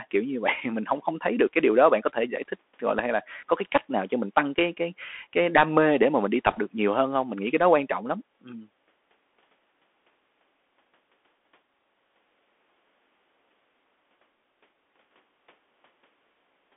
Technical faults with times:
0.00-16.77 Bluetooth CVSD headset codec
6.51-6.59 bit errors on a Bluetooth voice link

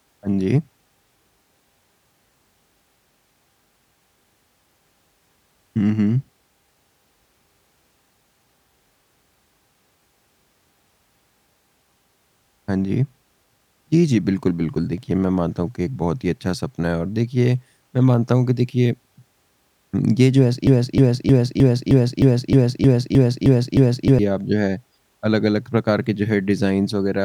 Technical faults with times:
20.67-24.19 broken-record loop

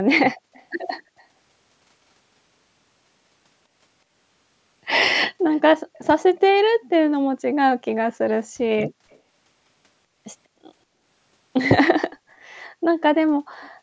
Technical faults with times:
0.53-0.65 echo leak
0.98-1.25 echo leak
5.52-5.60 echo leak
5.94-6.00 echo leak
9.10-9.19 echo leak

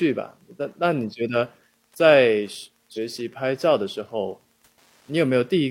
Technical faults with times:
0.00-5.70 Wi-Fi interference
2.93-2.98 damaged data in a compressed stream

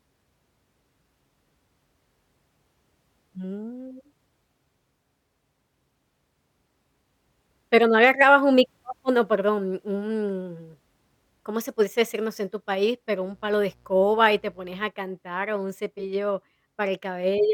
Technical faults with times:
13.32-14.88 mains buzz

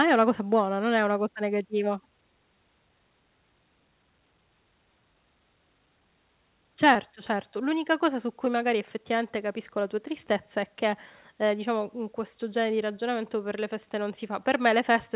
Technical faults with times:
6.94-6.97 short concealed packet loss
8.45-8.48 short concealed packet loss

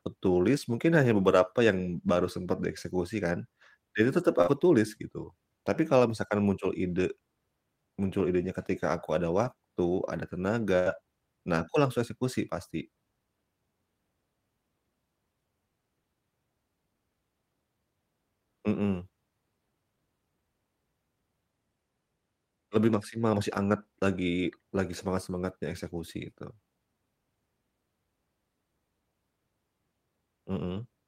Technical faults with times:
4.41-4.49 burst of packet loss
4.47-4.49 lost packet rebuilt from error correction
9.45 lost packet rebuilt from error correction
10.79-10.87 burst of packet loss
10.85 lost packet rebuilt from error correction

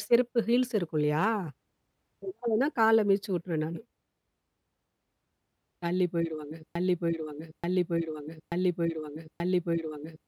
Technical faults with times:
6.75-10.28 broken-record loop

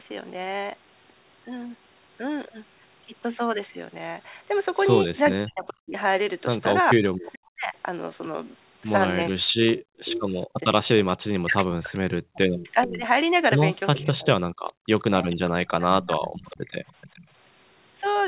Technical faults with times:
5.32-7.74 speech suppressed in double talk
7.32-7.39 echo leak
9.33-16.43 speech suppressed in double talk
9.76-10.21 echo leak
11.95-17.27 echo leak

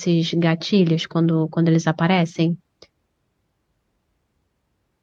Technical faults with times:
none

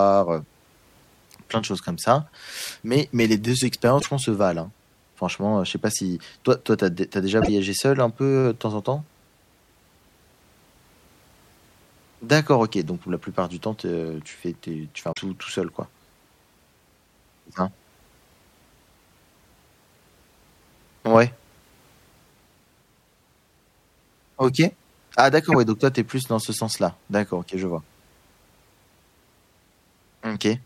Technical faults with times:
3.96-4.07 damaged data in a compressed stream
7.38-7.49 damaged data in a compressed stream
15.09-15.18 damaged data in a compressed stream
25.52-25.55 damaged data in a compressed stream

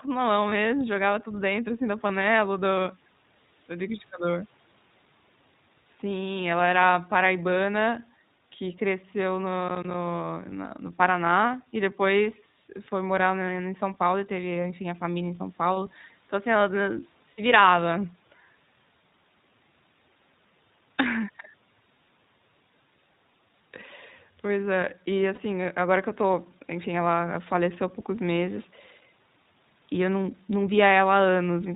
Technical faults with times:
0.00-31.76 iLBC codec
0.50-0.53 lost iLBC frames
9.69-9.94 processor overload crackle
17.32-17.39 lost iLBC frames
25.34-25.39 lost iLBC frames

